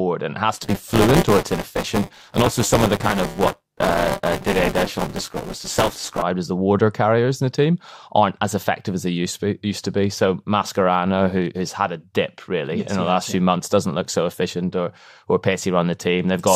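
Buffer tearing, 0.53 to 6.23 s: the buffer's writer and reader have slipped, splicing roughly a fifth of older audio into each period, which makes the speech buzz robotically at 200 Hz.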